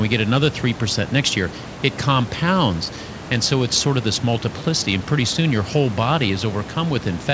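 No technical faults are audible.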